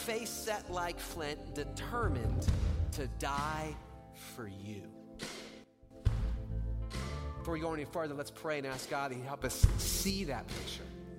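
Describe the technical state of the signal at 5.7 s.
A digital gain setting was likely applied between one sample and the next with no ramp, producing a sudden gain jump from 5.64 to 5.91 s. The sound and its background noise drop together by about 12 dB, then return abruptly.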